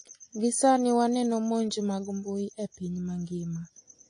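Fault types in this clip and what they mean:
AAC compression: The speech sounds dull and smeared throughout, with nothing above 9.8 kHz. The codec damage is plainly audible. The likely cause is AAC-LC coding at a low bitrate, around 32 kbps. The encoder cuts the top band and coarsely quantises what remains.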